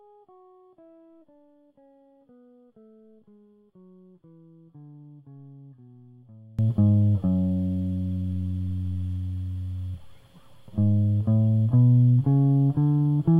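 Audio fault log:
0.00–6.59 s, one channel inverted: the music falls by about 27 dB to a faint remnant, likely from one channel's reversed polarity cancelling its partner in a mono sum. Unlike a plain level drop, only the inter-channel difference remains.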